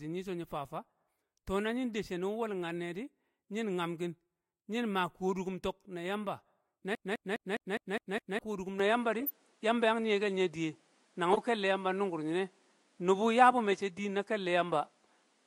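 At 2.64 to 2.66 s a corrupt frame is decoded: a single damaged compressed frame was played as though valid, so its misread gains and codes put energy in the wrong frequency bins. The result is a faint blip, peaking at about -35 dBFS, lasting roughly one frame.

From 6.95 to 8.39 s the playback behaves like a CD stuck on one turn. A segment of about 205 ms is repeated seven times, with a brief mute at each jump back. The result is the fast, evenly spaced stutter of a skipping disc, the same fragment cycling at close to five times per second before playback moves on.

At 8.80 s the sound changes character for the rest of the clip, most likely because the input switched to a poorer device. There is no gap at the changeover. Afterwards nothing is present above 11.4 kHz, so the top end is duller. The level shifts by about 5 dB, and a new noise floor sits about 40 dB below the signal.

Three more corrupt frames appear after the switch. 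At 9.20 to 9.30 s several consecutive frames are damaged, giving a noisy burst of roughly 100 ms peaking at about -20 dBFS. At 11.33 to 11.38 s a shorter two-frame chirp reaches a similar level. At 13.71 to 13.73 s a single-frame blip peaks at about -25 dBFS.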